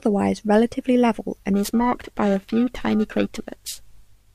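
From 1.54 s to the end of the clip, the speech takes on periodic clock jitter: interference is wobbling the converter's sampling clock at a steady rate of around 1 kHz, so every component of the speech gains sidebands spaced about that far above and below it, worst on the higher frequencies. It sounds like a rough, metallic edge riding on the speech. Unlike hum or a whine, it disappears in the pauses, and unlike random jitter's diffuse hiss it has a fixed, tonal roughness.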